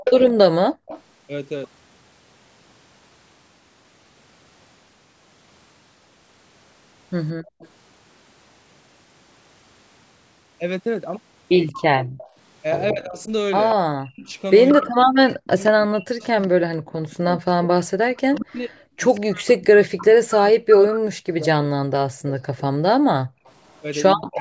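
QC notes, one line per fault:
0.00–1.01 s, 7.60–7.68 s and 11.67–23.82 s, echo leak: a delayed copy of the speech trails the talker by about 182 ms. It is strong at the start (about 5 dB under the speech), barely audible at 7.6 s, and a faint shadow about 15 dB down through the long later stretch. Most likely the far end's echo canceller is not removing all of what its microphone picks up from the loudspeaker.
0.68–0.86 s, 7.34–7.60 s, 12.02–12.18 s and 23.34–23.45 s, background gated by the echo canceller: the room tone abruptly drops out for a tenth to a third of a second each time, falling about 40 dB (about 35 dB at 23.3 s), then snaps back. The canceller is clamping the microphone hard while the loudspeaker plays.
0.00–0.04 s and 12.91 s to the end, speech suppressed in double talk: the speech briefly dips about 15 dB at the very start. From 12.9 s it is repeatedly pushed down or cut out, for roughly seven seconds in total and as deep as about 40 dB. 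This is likely the canceller ducking both sides while they overlap.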